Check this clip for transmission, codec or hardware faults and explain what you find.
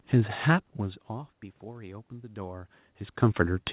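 No faults found.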